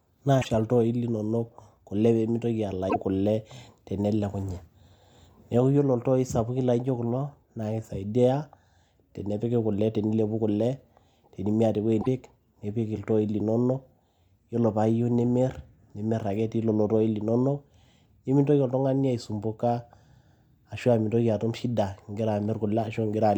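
Three quick glitches in this speech, at 0.41 to 0.46 s, 2.89 to 2.96 s and 12.01 to 12.07 s, each about two or three MP3 frames of 26.1 ms. At each one the speech skips forward and the first frames after the gap come out garbled. The likely cause is a broken MP3 bit reservoir: frames went missing, so the next frame reached back for its borrowed data and decoded bytes that belonged to some other frame.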